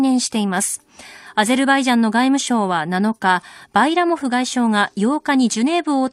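No faults are audible anywhere in the speech recording.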